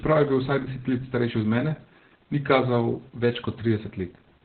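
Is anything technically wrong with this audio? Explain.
Yes. Opus voice compression runs throughout. Nothing comes through above about 4.3 kHz, which points to the SILK coder in narrowband mode at a very low rate, around 8 kbps, with coarsely coded excitation. The speech sounds heavily muffled, hoarse and slightly robotic.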